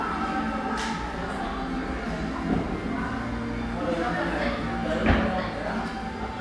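Nothing goes wrong anywhere in this one; there's not a single technical fault to point to in the sound.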